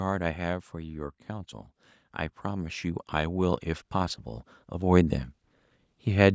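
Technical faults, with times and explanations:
2.43–5.22 s, automatic gain rising: gain climbs about 10 dB over nearly three seconds, lifting voice and background noise together, unlike a talker simply moving closer.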